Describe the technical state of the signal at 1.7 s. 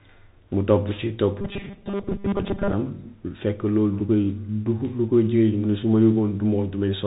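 At 1.7 s the sound is caught in robotic sound from repeated short buffers, running from 1.41 to 2.73 s. It turns into a rigid, metallic buzz fixed at 200 Hz that only loosely follows the speech. The likely cause is audio arriving too seldom, so the player keeps replaying a short slice, here about 5 ms since the buzz sits at one over that length, while most of the real audio in the span is skipped. Unlike a codec warble, the pitch stays locked rather than wandering.

Underneath, and throughout the clip, a Bluetooth CVSD headset codec is plainly audible. Nothing passes above 4 kHz, s sounds come out scratchy, and a granular hiss sits under the speech. This fits a 64 kbps one-bit delta coder whose adaptive step can't keep up with loud high content. It is a constant narrowband roughness, not the timed, pitched buzz.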